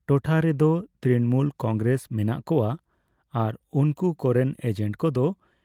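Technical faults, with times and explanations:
No technical faults are audible in this speech recording.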